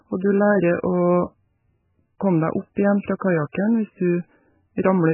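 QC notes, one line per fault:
Throughout: MP3 compression. Speech is heavily damaged and watery, with nothing above 3 kHz, likely from an MP3 encode near 8 kbps starving bits.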